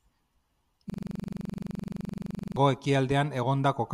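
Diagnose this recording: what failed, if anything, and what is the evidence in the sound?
From 0.90 to 2.57 s the speech freezes into a rapid, rattling stutter at about 23.4 Hz: a 42.67 ms fragment repeats exactly, dozens of times over. This is a system hang loop at the driver or buffer stage. The host stalled while the hardware kept replaying one ring buffer, consistent with a 2048-sample buffer.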